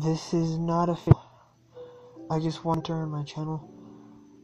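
At 1.07 s and again at 2.74 s the audio breaks up for roughly 70 ms, the signature of damaged data in a compressed stream. In both places the encoded bytes no longer make sense to the decoder, so it misreads or discards those frames, loses frame sync and hunts for the next valid header. What comes out meanwhile is a chirp, squawk, click or short hole before clean decoding resumes.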